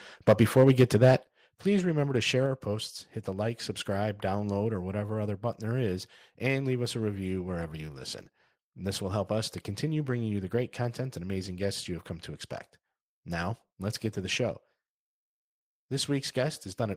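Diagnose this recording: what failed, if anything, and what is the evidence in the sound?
The microphone input gain was likely set too high at the converter, pushing peaks about 6 dB past full scale. From 0.28 to 1.12 s, before "please remember to share", the loudest syllables have flattened tops on a few percent of samples, giving microphone overload's harsh crackle.

Call processing then likely stepped the microphone volume down twice. At 1.23 s, right before "please remember to share", voice and background drop together by about 8 dB. At 2.46 s, between that phrase and "our posts hit the", they drop a further 3 dB or so.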